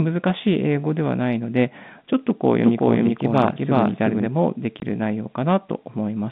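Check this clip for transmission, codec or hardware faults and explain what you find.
Two faults stand out, carried over a telephone-band line that passes roughly 150 Hz to 3.7 kHz with G.711 coding.

Doubled audio track, 2.64 to 4.26 s: a second copy of the speech runs about four tenths of a second behind the original, at roughly the same loudness. The copy is likely the same signal captured again through a slower path and mixed back in. It has no decay or room colour, so it sounds like a crisp echo, and it starts and stops abruptly at those times.

Packet loss filled with silence, 4.80 to 4.82 s: a 20 ms hole cuts into the speech, pointing to a single lost packet that the receiver replaced with silence instead of concealing it. The gap has hard edges and is heard as a brief dropout.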